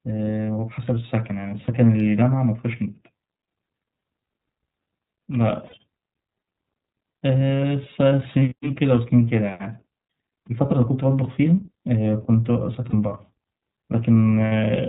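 The whole clip carries iLBC codec coloration. Nothing above 4 kHz survives, and the speech sounds rough and synthetic, which fits 30 ms iLBC frames.

Lost iLBC frames occur at 1.65, 5.66, 8.49, 10.68, 12.9 and 14.45 s. Each gap lasts about 30 ms, except those at 5.66 and 14.45 s, which last about 60 ms. The decoder repeats the last pitch cycle with noise, so each gap sounds like a brief buzzy held vowel. The voice then recovers at once.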